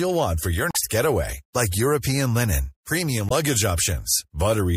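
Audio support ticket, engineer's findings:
MP3 compression, whole clip. Speech sounds watery and swirly, treble dulled above a fixed cutoff, sibilants chirpy and metallic, consonant onsets smeared. Likely cause: encoder starved of bits, treble truncated and weak spectral lines dropped, flickering frame to frame; damage plainly audible, consistent with roughly 64 kbps. Component: encoding stage upstream of playback.

Damaged data in compressed stream, 0.70–0.76 s. Brief squawk or blip. Decoder hits corrupt frames, loses sync, jumps to next valid header. Component: stream transport or storage.

Damaged data in compressed stream, 3.28–3.32 s. Same short glitch, same resync mechanism. Component: stream transport or storage.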